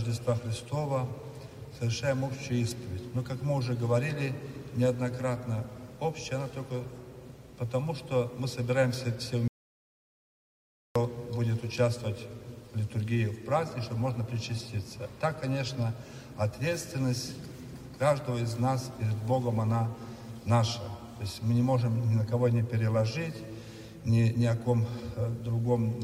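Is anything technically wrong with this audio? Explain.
Yes. From 9.48 s to 10.96 s there is an audio dropout to silence: the sound stops abruptly mid-flow and returns just as suddenly about 1.48 s later, and whatever happened in that stretch is lost. The gap is true silence with no room tone or hiss, which sets it apart from a natural pause or a gated quiet passage, where some background would remain. The cause is likely a momentary loss of input while recording continued, writing silence.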